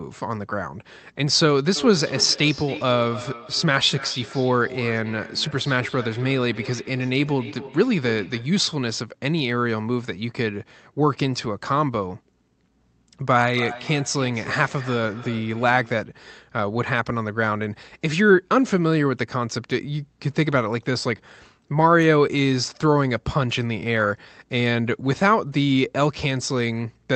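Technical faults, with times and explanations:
1.76–8.59 s and 13.53–16.07 s, feedback echo between two devices: sound returns roughly every 0.3 s, peaking about 14 dB below speech. A second device replays it into the microphone, uncancelled.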